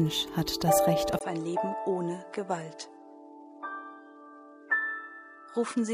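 At 1.19 s the sound cuts out for about 20 ms, then returns duller and a few decibels quieter for the rest of the clip. Nothing remains above about 10.2 kHz from that point, and a faint new background noise sits far below the signal. This points to an input switched to a poorer device, most likely a change of capture hardware mid-recording, bringing a narrower band, its own tone, a lower level and its own noise floor.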